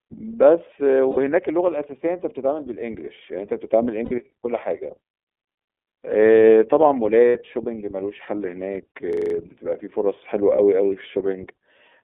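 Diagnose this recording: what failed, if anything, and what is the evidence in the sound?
The codec stage failed in a way heard through the whole clip. This is the iLBC codec. The speech is confined to a telephone band of about 300 Hz to 3.6 kHz, with nothing above. Each 30 ms frame is coded on its own, and the result sounds plainly rough and synthetic. The damage is constant rather than tied to any moment. It fits iLBC's 13.33 kbps mode.

The network stage dropped packets, heard as lost iLBC frames. Gaps of 60 ms sit at 1.11 s, 4.05 s and 7.29 s, and a 30 ms gap at 10.56 s. Each fills with a held, faintly buzzy vowel as the decoder repeats the last pitch cycle with noise. The longer gaps fit two lost frames, the shorter one a single frame. Because frames stand alone, the voice recovers at once.

The driver or buffer stage hung, producing a system hang loop. From 9.13 s to 9.34 s one 42.67 ms slice of audio repeats exactly, five times. 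At 23.4 repeats per second it sounds like a rapid mechanical stutter. The system froze while the hardware kept cycling one ring buffer, which fits a 2048-sample buffer. About a fifth of a second of real audio is lost behind the loop.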